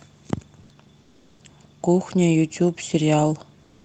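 In this speech clip, the background in two pauses, 1.01 to 1.39 s and 3.63 s to the end, turns into a smooth, featureless hiss about 3 to 4 dB quieter. This is comfort noise in place of the background, likely from Opus discontinuous transmission through a call path band-limited to 8 kHz.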